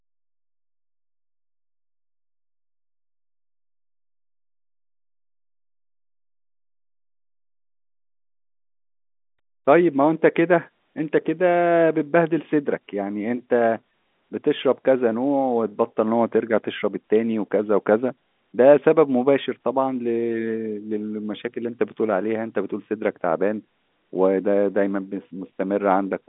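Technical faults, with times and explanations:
The speech comes over a G.711 telephone line working as designed, with the sound confined to roughly 200 Hz to 3.6 kHz, nothing audible above 3.8 kHz, and at most a faint level-following quantisation hiss from the 8-bit logarithmic coding.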